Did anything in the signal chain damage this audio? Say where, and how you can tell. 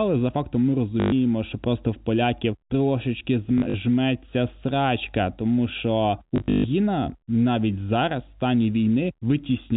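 Yes. The damage is at the network stage: packet loss with last packet repeated, at 1.0 to 1.12 s just before "що просто в поляків", 3.58 to 3.74 s after "просто в поляків трошечки", and 6.36 to 6.64 s after "срачка тому що", the longest gap (about 140 ms solid). The receiver replays the previous packet, so these gaps stutter robotically and buzz near 50 Hz, which fits 20 ms packets. On a spectrogram these show as repeated identical vertical slices. The waveform shows copied blocks, and the G.711 band-limit stops at 4 kHz.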